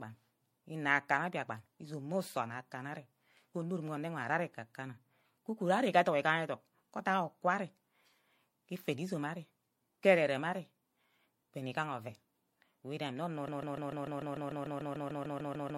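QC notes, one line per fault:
Throughout: generation loss. The sound is swirly, smeared and hollow, with blurred attacks and nothing above 16.5 kHz. This is likely the result of several lossy MP3 passes, around four, at 64 kbit/s. Each pass quantises on its own frame grid, so the noise and spectral holes stack up. A single encode at that bitrate would not sound this washed out. The smearing is worse than one pass could produce, and that excess is what marks it as compounded rather than a single low-bitrate file.
13.48 s to end (15.77 s): broken-record loop. A 148 ms fragment repeats exactly and back to back, 16 times, until the clip ends. The likely cause is a player, encoder or stream that stalled and kept resending the last piece it held, so the audio meant for those final seconds is gone. Unlike an echo or a stutter, there is no decay and no variation between cycles. Each repeat is identical, with a fixed rhythm of about 6.8 repeats per second.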